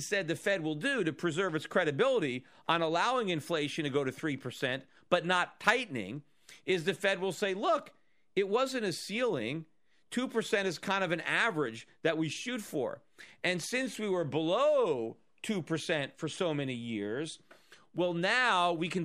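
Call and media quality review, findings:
Call and media quality review findings: none, no faults found in this speech clip.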